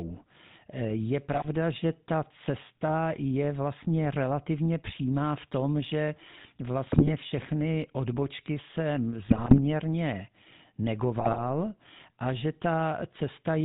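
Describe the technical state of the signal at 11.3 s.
At 11.3 s you're in the middle of a burst of GSM bit errors running from 11.2 to 11.44 s. Corrupted bits reached the decoder, so the filter, pitch or gain values came out wrong in the frames that were hit. The speech breaks into squawks, pops and gargling, which fits a bit error rate of around 3%. Underneath all of that is the GSM full-rate codec, present the whole way through. It rebuilds the voice from a vocal-tract model driven by sparse, regularly spaced pulses, and nothing gets through above 4 kHz. The result is a plainly audible buzzy, gravelly roughness, which points to the 13 kbps full-rate coder.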